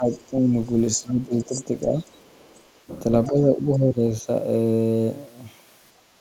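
An echo canceller likely unable to separate near and far talkers during double talk pulls the speech down from 0.00 to 0.54 s by about 10 dB, dipping it for roughly a third of a second. From 0.12 to 0.30 s, residual echo, likely left where cancellation fell short, lets the other side's voice leak through faintly, about 30 dB under the speech. The speech suppressed in double talk returns from 0.96 to 2.47 s, deeper at about 15 dB, with the speech ducking for around a second. Within it, from 1.41 to 2.32 s, the other side's voice leaking through is much plainer, only about 15 dB below. Suppression strikes once more from 3.28 to 4.28 s, about 10 dB down across roughly 0.7 s.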